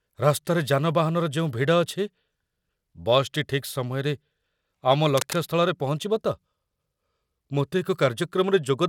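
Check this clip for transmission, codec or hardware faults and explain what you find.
One hardware fault is audible. From 5.17 to 5.36 s there is cable scratch noise. A worn cable or connector was likely moved, so its contact resistance jumped about rapidly. That adds a dense, ragged scratching burst over the speech, roughly 10 dB below it.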